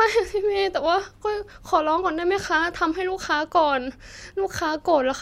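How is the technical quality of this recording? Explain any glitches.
The technical quality of this recording holds up, and there are no glitches to explain.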